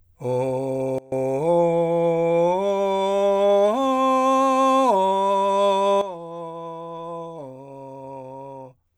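Music with two sudden gain jumps. From 0.98 to 1.12 s the level falls by about 23 dB and then snaps back, and from 6.01 s to the end it drops by about 12 dB. Each change lands within a single sample, likely from a gain setting applied without a ramp. Unlike a fade or compressor pumping, there is no glide, and the background noise drops by the same amount as the music.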